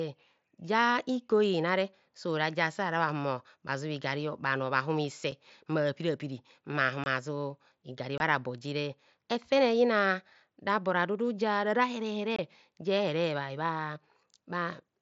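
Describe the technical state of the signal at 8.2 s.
From 8.18 to 8.20 s, just before "bo jere", the signal shows unconcealed Bluetooth headset packet loss. For about 22 ms the voice data from the headset never arrived, which fits three lost packets, and nothing filled the gap, so the sound simply stops and restarts. On a waveform this is a short flat stretch with sharp edges. On a spectrogram it is a narrow blank column cutting across the roughly 8 kHz band of the mSBC headset link.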